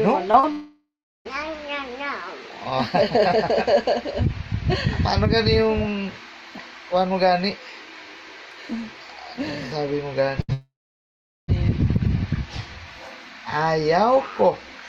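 Right at the start, at 0.31 to 0.35 s and again at 0.39 to 0.45 s, there are two bits of short concealed packet loss: about 20 ms and then about 40 ms of the stream didn't reach the decoder in time. The receiver papered over each hole by stretching out whatever sound came just before, then crossfaded back to the real signal. You hear it as a quick smear or tiny wobble.

Straight after, from 0.51 to 1.27 s, comes a long network dropout. Roughly 740 ms of audio is simply gone, most likely because packets stopped arriving altogether. The concealment first carries the last sound on as a fading buzz or hiss, and the final 350 ms or so of that stretch is just silence before the audio picks up again, further along than where it left off.

At 10.41 to 10.50 s there's a burst of packet loss, around 80 ms worth lost together. The receiver extends the preceding sound and turns it down as the gap goes on, so it comes across as a short held buzz or hiss that sags, and then the audio jumps ahead with that slice missing.

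Barely 20 ms later, from 10.52 to 11.5 s, a second long network dropout hits, this one likely another complete stall in delivery. About 960 ms never gets played. There's a brief decaying tail of concealed sound, then roughly 770 ms of dead air before the audio returns, with everything in that span lost.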